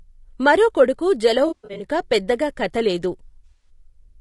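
The whole clip likely went through low-delay AAC compression (AAC-ELD at what sounds like 32 kbps), whose low bitrate puts noise between the harmonics, leaving speech rough and grainy. From 1.47 to 1.84 s, between "మరో కొడుకు" and "పెద్దగా కథ లేదు", scattered bursts of AAC frame loss totalling 220 ms, the longest about a tenth of a second, are concealed by the decoder as smeared, noisy patches. From 3.49 to 3.69 s, after "పెద్దగా కథ లేదు", another 120 ms of lost frames is patched the same way.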